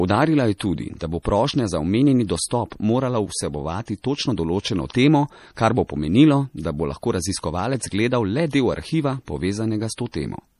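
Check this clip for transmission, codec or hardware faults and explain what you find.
Two codec faults are present in this speech recording, one running throughout and one at three early moments.

MP3 compression throughout: the encoder was short of bits, which fits a rate around 40 kbps, so it likely discarded weak spectral lines that flicker between frames and removed everything above 15 kHz. The damage is plainly audible as a watery, swirling texture with dulled treble.

Pre-echo at 0.58–0.60 s, at 0.99 s after "je tudi", and at 1.23–1.25 s just before "prošnja za": quantisation noise spread across a transform block leaks ahead of sharp onsets, so each attack is preceded by a brief hiss of about 17 to 27 ms and sounds smeared.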